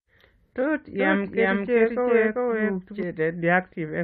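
Repeated frames appear at 0.61 s, where a 23.2 ms stretch of the speech plays twice in immediate succession. A single compressed block, which fits one codec frame, was evidently written or sent a second time, so the decoder rendered the same slice of audio again before moving on. The result is a brief stutter, and the recording runs 23.2 ms longer than it should.

A doubled audio track runs from 0.99 s to 3.03 s. Throughout that span a second, full-band copy of the speech sits roughly 0.4 s behind the first, at about the same loudness. It is clean, with no decay and no room colour, so it is not an echo or reverberation. It switches on and off abruptly at the edges of the span. The likely cause is the same signal reaching the mix twice, once through a slower path that lags the direct one.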